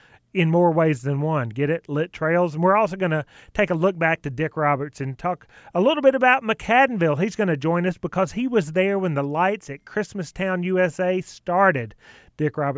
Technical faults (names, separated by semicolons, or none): none